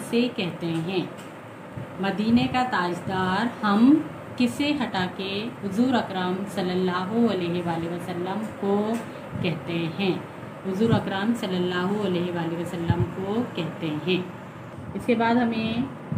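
No technical faults can be heard anywhere in this clip. The sound carries on without any interruption, break or change in level.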